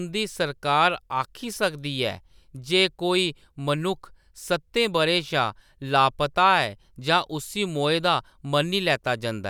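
Speech recording, no technical faults detected.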